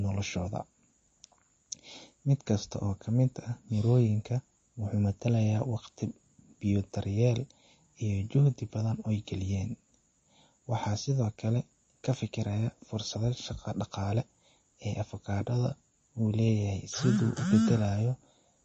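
Speech throughout, with plainly audible MP3 compression damage over its whole length. Nothing is present above 8.3 kHz, so the top of the spectrum is cut off flat and s sounds lose their air. The remaining band has a watery, swirling texture and smeared onsets, likely from weak frequency lines being zeroed and switching on and off between frames. The damage is consistent with a starved bitrate around 32 kbps.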